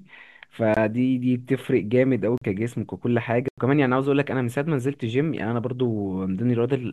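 Blocks of digital silence at 0.74 s (23 ms), 2.38 s (40 ms) and 3.48 s (93 ms). The output buffer went unfilled, which fits 1024- and 4096-sample blocks, so the audio drops abruptly to silence. The longest gap is heard as a brief hole.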